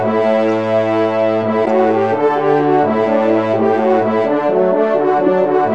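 Two short glitches, at 0.48 s and at 1.65 to 1.67 s (the second much louder), mark a corrupt frame decoded. Damaged codes put energy at wrong frequencies, unlike a dropout's silence or a broadband click.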